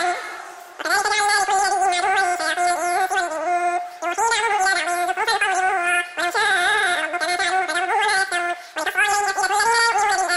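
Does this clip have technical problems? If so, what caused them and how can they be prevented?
Yes. A wrong sample rate runs through the whole clip. Everything plays three times too fast and about 19 semitones too high, which fits audio captured at 16 kHz being played at 48 kHz without conversion. On a spectrogram, features appear squeezed in time and stretched upward in frequency. To prevent it, carry the sample rate with the file and resample whenever the playback rate differs.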